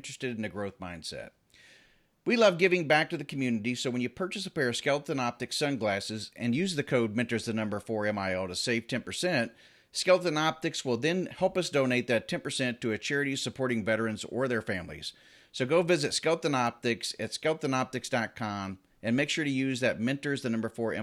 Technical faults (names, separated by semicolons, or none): bit error spike